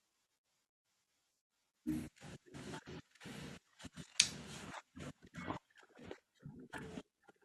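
No technical faults can be heard anywhere in the recording.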